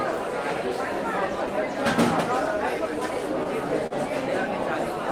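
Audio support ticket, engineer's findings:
Short stall from a late packet, 3.87–3.94 s. Jitter buffer ran dry waiting on a delayed packet; receiver held the last sound about 38 ms, then resumed from the same point. Nothing lost, playout delay up 38 ms. Audible as brief stretch with faint buzz or dip.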